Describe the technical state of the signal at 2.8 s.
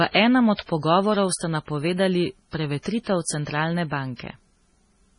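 Pre-echo runs from 2.83 to 2.86 s, just after "pogovorov ste napovedali". A sharp attack lands late in a transform block, so quantisation noise sized for the loud onset spreads about 30 ms ahead of it, leaving a brief hiss before the attack and blurring its edge.

MP3 compression colours the same moment. Nothing is present above 10.6 kHz, and the heavy swirly, watery smearing likely comes from a low-bitrate MP3 encode, which fits roughly 24 kbps. That encode zeroes weak spectral lines that flicker between frames.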